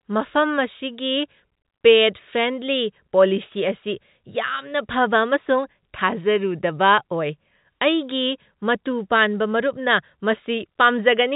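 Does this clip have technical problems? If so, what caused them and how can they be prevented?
No, there are no faults.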